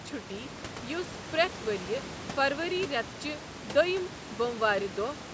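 No technical faults can be heard in this speech.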